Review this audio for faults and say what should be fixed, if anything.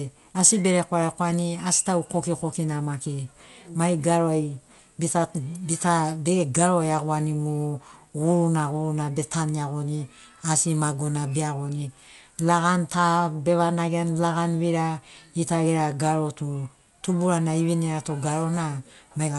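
Dolby Digital compression, throughout: the speech is dull, empty above 11.5 kHz, with rough fluttering noise, likely from dither-filled bands at a bitrate near 64 kbps. To prevent it, encode from the original source at a much higher bitrate instead of a low-rate AC-3 transcode.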